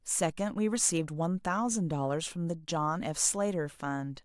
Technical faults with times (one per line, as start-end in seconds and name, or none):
none